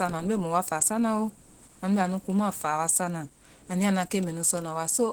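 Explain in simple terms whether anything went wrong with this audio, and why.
Opus compression, throughout the whole clip, is the likely cause of the speech sounding noticeably hoarse, muffled and grainy. To squeeze the audio into very little data, the encoder switched to its speech-focused mode, which rebuilds the sound roughly instead of keeping every fine detail.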